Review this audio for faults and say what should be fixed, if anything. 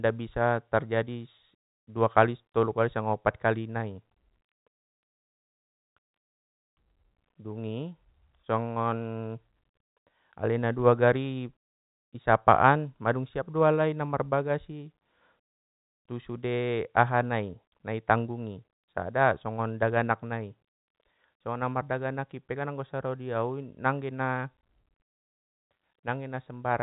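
No faults turn up in this audio, so nothing needs to be fixed.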